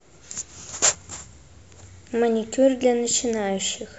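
No technical faults can be heard anywhere in this speech recording. Nothing breaks into the sound at any point.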